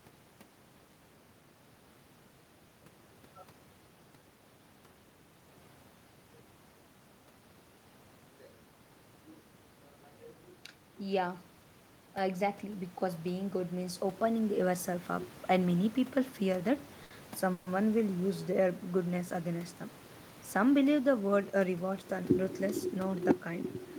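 Around 9.5 s the talker seems to move relative to the mic, so the level drops on its own. That's just a person shifting, not a system fault, and the room noise underneath is part of the recording.

From 12.15 to 14.89 s you get automatic gain rising. With the input sitting about 10 dB lower, the gain control slowly brings the level back up by about 6 dB over nearly three seconds. Because it lifts everything together, the room noise swells along with the voice, which is how you can tell it's the gain stage and not the talker getting closer.

At 17.03 to 17.12 s there's a short stall from a late packet. The next packet wasn't there on time, the jitter buffer ran dry, and the receiver stretched the last bit of sound for about 70 ms until it showed up. Nothing is actually lost, but that moment hangs a touch too long, and the playback is now running about 70 ms further behind.

A moment later, from 17.52 to 17.68 s, there's a call audio freeze. 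The sound holds and smears into a fading continuation for about 140 ms instead of dropping to silence. Then it picks up exactly where it left off, so a gap has been inserted rather than anything cut. The likely cause is packets getting held up in transit long enough to empty the buffer.

Then from 21.34 to 22.03 s there's a jitter buffer speed-up. With extra audio piled up after those delays, the receiver trims tiny pitch-period-sized slices again and again, around 50 ms in total. The result runs at roughly 107% speed with the pitch unchanged, so that stretch sounds slightly rushed before things settle.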